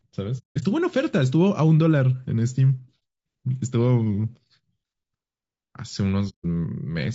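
Throughout the speech the sound is rough and grainy, with noise filling the gaps between harmonics and a thin, synthetic-sounding top band. This is plainly audible low-delay AAC compression, likely AAC-ELD at a bitrate around 32 kbps. Its short frames resolve pitch poorly, and unlike background hiss, the grain follows the voice.

AAC frame loss with muting first occurs from 0.38 to 0.63 s, where most of a quarter second drops out, including one gap of about a fifth of a second. It recurs briefly at 3.00 s and again from 6.29 to 6.46 s. The decoder zeroed the missing frames, and the overlapping windows fade the sound out and back in. This leaves soft-edged holes, unlike a hard dropout.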